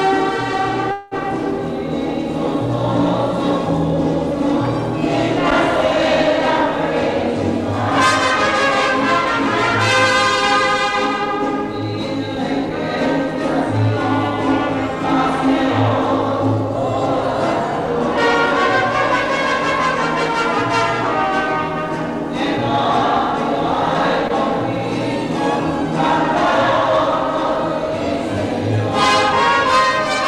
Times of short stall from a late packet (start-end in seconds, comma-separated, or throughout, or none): 24.28-24.33